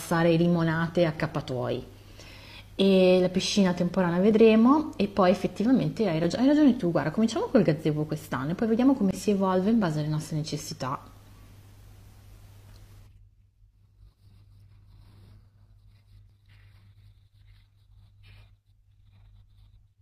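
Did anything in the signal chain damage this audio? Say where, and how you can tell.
Yes. Network stage: an overlap between stream segments on one-second boundaries drops about 29 to 43 ms of speech, heard as small skips at 1.35, 2.32, 4.31, 10.29, 15.29 and 16.30 s.

Driver or buffer stage: blocks of digital silence, likely from unfilled output buffers, give a tick at 6.24 s and a 21 ms hole at 9.11 s, which fits a 1024-sample buffer.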